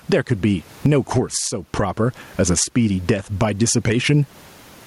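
Gain pumping runs through the whole speech recording, a gain swing of about 15 dB. The likely cause is far too much input gain, with a fast limiter clamping each loud moment and squashing the speech.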